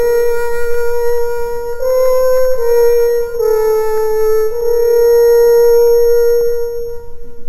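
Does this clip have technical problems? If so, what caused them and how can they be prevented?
Yes. A bright metallic fizz runs through the whole clip, rising and falling with the sound's level, sitting about 23 dB below it in the 6 to 12 kHz band. This is imaging from sample-and-hold upsampling: each sample was simply repeated, which points to a 12 kHz source raised to 48 kHz, so mirrored spectrum copies appear around 12 kHz multiples. To prevent it, upsample with a proper interpolating low-pass filter instead of sample repetition.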